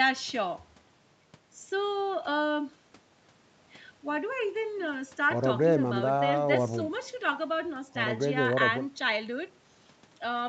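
No technical faults heard.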